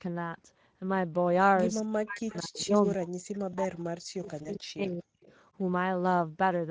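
Throughout, the speech has a plainly audible hoarse, grainy texture, and the band above 4 kHz sounds like a thin, noise-like fill rather than real detail. This is Speex codec damage. The CELP coder has too few bits to model the excitation accurately, which fits a middle Speex setting of roughly 17 kbps.

At 0.53 s, a brief smear lasting about 20 ms stretches the sound and fades before the voice recovers. This is VoIP packet loss concealed by the speech codec. One frame went missing, and the decoder extrapolated from its last pitch and filter state.

From 1.8 s to 5.07 s, the voice repeatedly dips, dulls and drops out in pieces, at its deepest by around 40 dB. In total this affects about 3 seconds. The likely cause is speech suppressed in double talk: the echo canceller could not separate this talker from the far side and turned both down.

Between 2.29 s and 2.38 s, a faint copy of the voice trails behind by 241 ms, roughly 20 dB below the speech. 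This is an echo leak, likely from a loudspeaker on one end whose echo canceller let part of the returning signal through.

At 4.43 s, a second 20 ms gap is concealed the same way. It leaves a short, fading fill where the decoder filled in the single lost frame from its previous state.

From 5.21 s to 5.33 s, the delayed copy returns at the same 241 ms lag but much quieter, roughly 35 dB down. This is again an echo leak, likely the same incompletely cancelled loudspeaker path. Nothing above 8 kHz is present, which fits the call's wideband microphone processing.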